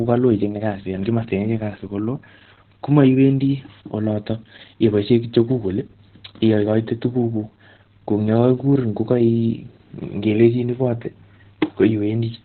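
From start to finish the speech carries heavy Opus voice compression. Nothing is present above about 4.2 kHz, so the codec has dropped to narrowband and is running its SILK linear-prediction coder with a coarsely coded excitation. The result is muffled, telephone-like speech with a hoarse, slightly robotic edge. Damage this severe points to a very low bitrate, which fits a setting around 8 kbps.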